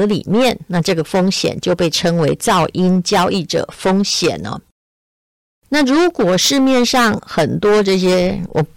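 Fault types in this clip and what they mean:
Hard clipping: the speech is pushed about 14 dB beyond what a stage in the chain can pass, so every waveform peak is sliced flat. That overload is heavy enough that a large share of the signal, roughly one part in seven, sits at that stage's limit for the whole clip, giving a harsh, buzzy fuzz on all louder syllables. Unlike soft saturation, the flat tops create abrupt high harmonics rather than a smooth, rounded thickening.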